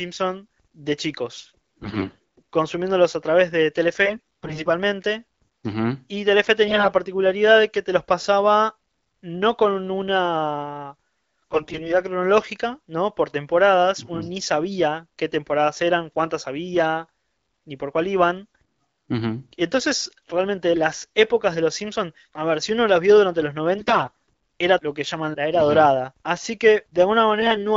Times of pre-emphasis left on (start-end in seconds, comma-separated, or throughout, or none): none